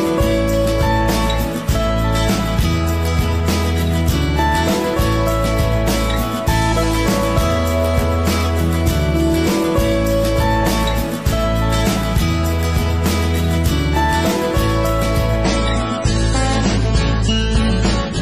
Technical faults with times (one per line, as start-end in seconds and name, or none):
15.44-18.21 adaptive stream at a lower bitrate